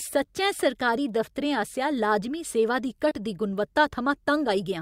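At about 3.09 to 3.13 s, a short concealed packet loss occurs: roughly 20 ms of the call's audio failed to reach the decoder in time. The receiver covered the gap by extending the preceding sound, synthesising about 13 ms of stand-in signal and then crossfading back into the real stream. The result is a brief smeared wobble in the speech, a moment where the sound seems to blur rather than drop out cleanly.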